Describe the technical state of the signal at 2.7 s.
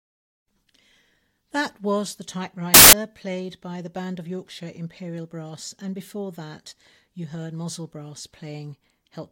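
A burst of loud, harsh broadband noise covers the speech from 2.74 to 2.93 s: samples built from the wrong bytes, with the low-order bytes moved into the dominant position.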